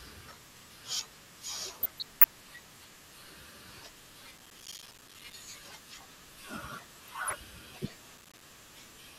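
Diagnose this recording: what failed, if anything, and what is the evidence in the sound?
DAB burbling, a decoding fault at the codec stage, appears from 1.83 to 2.65 s and again from 7.07 to 7.33 s. A low rate of bit errors slips past error correction and corrupts MP2 sub-band samples and scale factors, so single bands leap in level frame by frame, producing bubbling noise blips rather than clicks.

Processor overload crackle, a driver or buffer failure, sits from 4.36 to 5.34 s and from 8.18 to 8.42 s. Roughly 70 and then 20 missed deadlines each leave a hard-edged gap of silence about one 5 ms buffer long. The result is broadband gritty tearing, unlike the band-limited blips of burbling.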